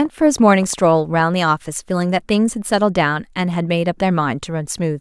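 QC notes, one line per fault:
0.05–1.21 s, train of clicks: about ten similar clicks at roughly 7.9 per second, unevenly spaced, peaking near the level of the speech itself. The pulses sit on top of the sound as popping, most likely interference from nearby equipment or a faulty connection or power supply.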